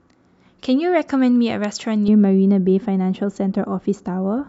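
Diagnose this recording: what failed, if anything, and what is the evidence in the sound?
A single sharp snap sits on top of the speech at 1.64 s, lasting only a few milliseconds and unrelated to the talker's own sound. That brevity and hard onset fit an electrical switching spike in the analogue wiring: the likely cause is a nearby switch, relay or static discharge arcing briefly, with the line picking up the burst and adding it straight onto the audio.

From 2.08 s to the end, the speech turns dull and muffled, as if heard through a cloth, with sibilants and consonant detail softened. The top end falls away smoothly, sitting about 11 dB down at 10 kHz relative to 1 kHz. That gentle, progressive slope is the signature of de-emphasis applied wrongly, a treble-cut filter run on audio that had no pre-emphasis to undo, or run a second time.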